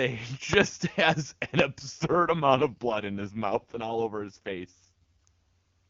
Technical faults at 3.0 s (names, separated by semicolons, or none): AMR rate drop